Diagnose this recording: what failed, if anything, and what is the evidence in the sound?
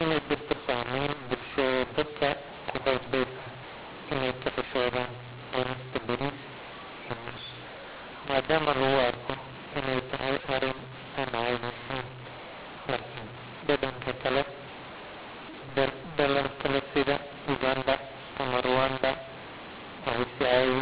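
The failure is a codec mismatch at the G.711 decode stage: mu-law and A-law mixed up. The speech was encoded as mu-law but decoded as A-law, so every 8-bit code lands on the wrong level. Loud parts come out harsh and gritty, levels jump unevenly, and the quietest samples get pushed well above silence, so the pauses fill with hiss. This runs through the whole clip, on top of the 4 kHz telephone bandwidth you'd expect from 8 kHz sampling.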